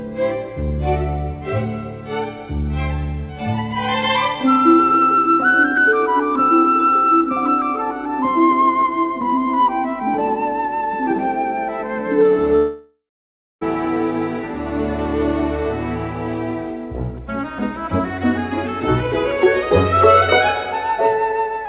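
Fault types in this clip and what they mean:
Long network dropout: from 12.56 to 13.63 s the last sound smears into a fading buzz or hiss, then about 0.65 s of silence follows before audio resumes with roughly a second skipped, likely from lost packets. Unlike a brief packet-loss click, it lasts over a second.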